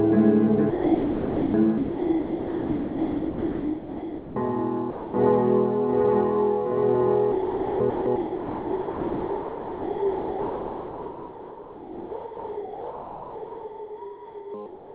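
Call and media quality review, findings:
Sound repeatedly cut out and replaced by steady, featureless hiss, returning when the detector triggered again: 0.70–1.54 s, 1.78–4.36 s, 4.90–5.14 s, 7.32–7.80 s, 7.90–8.06 s, 8.16–14.54 s (longest, about 6.4 s). Sound dropped by the voice detector, likely. Sender VAD classed the sound as background and stopped transmitting, and the receiver filled the gaps with comfort noise.

Final 14.66–14.94 s: real background swapped for flat synthetic noise about 3 dB quieter, lacking detail. Comfort noise in place of the background, likely from discontinuous transmission: the sender is silent and the receiver synthesises noise roughly matched to the background. Nothing above 4 kHz throughout, consistent with the G.711 mu-law call path.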